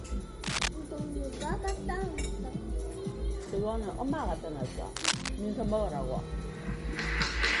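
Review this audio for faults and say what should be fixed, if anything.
The whole clip has a watery, swirly quality with nothing above 11.2 kHz, likely MP3 compression at a starved bitrate around 48 kbps. Export at a higher bitrate or keep a lossless copy.

There's cable scratch noise from 0.44 to 0.69 s and from 4.96 to 5.29 s, rustly bursts about as loud as the sound itself. A worn connector shifting its contact is the likely culprit. Swap or clean that cable and keep it still while recording.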